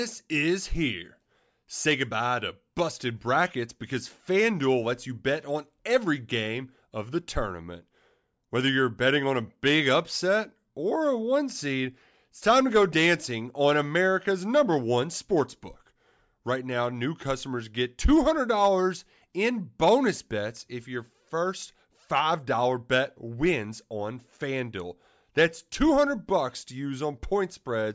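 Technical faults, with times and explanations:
No technical faults are audible anywhere in this speech.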